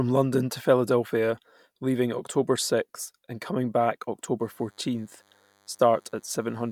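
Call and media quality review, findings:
Thin, steady buzz with a harmonic-rich edge from 4.40 s, just after "and coming back", to the end at 6.72 s; faint, well under the speech. DECT cordless phone buzz: nearby handset or base bursting every 10 ms, rectified into 100 Hz.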